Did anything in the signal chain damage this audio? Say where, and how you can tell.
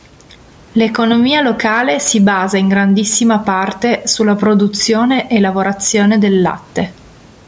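Yes. The damage is gain pumping, and it runs through the whole clip. The gain swings by around 10 dB as each loud syllable arrives. Loud and quiet passages sit unnaturally close in level, so the speech sounds squashed. The likely cause is microphone gain set far too high, with a fast limiter or compressor pulling it down on every peak.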